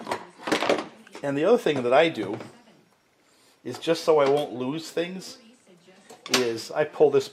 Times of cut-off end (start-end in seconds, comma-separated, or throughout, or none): none